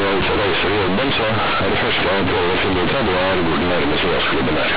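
Companded audio read as linear runs from start to finish of this speech clip. The bytes were A-law, the G.711 telephone coding, but playback treated them as plain linear 8-bit samples with no expansion. The logarithmic steps therefore land on the wrong amplitudes, and each sign change throws the waveform across roughly half its range. Quiet passages come out as loud as strong ones, so the result is a harsh, buzzing distortion with heavy noise filling every pause.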